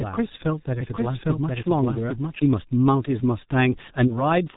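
From the start, the speech carries heavy G.723.1 codec damage. The sound is muffled, with nothing above 4 kHz. It is also hoarse, and consonants blur together. The coarse quality fits a rate near 6.3 kbit/s, with the voice model refreshed only every 30 ms.

From 4.07 to 4.16 s, there is VoIP packet loss concealed by the speech codec. The gap fits a single lost 30 ms frame. The decoder fills it by extending its last pitch and filter. This gives a brief buzzy or noisy, fading smear, and the voice stays distorted until 4.16 s.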